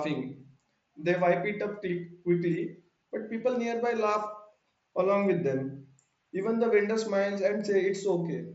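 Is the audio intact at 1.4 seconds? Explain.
Yes, the speech at 1.4 seconds is intact, with no fault at that moment.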